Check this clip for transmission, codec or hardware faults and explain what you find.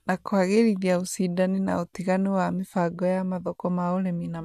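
No transmission, codec or hardware fault can be heard anywhere in the speech. There is nothing to report for any part of the clip.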